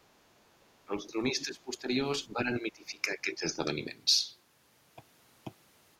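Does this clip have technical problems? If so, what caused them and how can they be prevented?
Yes. The speech dips sharply in level, by roughly 15 dB at its deepest, and thins or breaks up from 0.85 to 1.9 s and again from 2.33 to 3.58 s, each time for around a second in total. This is likely speech suppressed in double talk: with both ends talking at once, the echo canceller mistook the near talker for loudspeaker echo and attenuated everything. Using headsets, or an echo canceller with better double-talk detection, prevents this.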